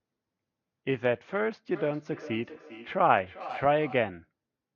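From 1.74 to 4.15 s, feedback echo between two devices: the speech returns roughly every 0.4 s, up to about 15 dB below it. A spectrogram shows repeated, fading copies.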